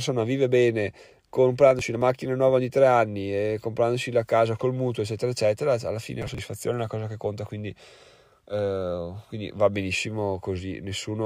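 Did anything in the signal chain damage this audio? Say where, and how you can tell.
Yes. There is processor overload crackle at the driver and buffer stage, from 1.71 to 2.01 s and again from 6.22 to 6.44 s. The speech breaks into gritty crackle as chunks of roughly 10 ms drop out. The processor missed buffer deadlines in a row, leaving hard-edged gaps.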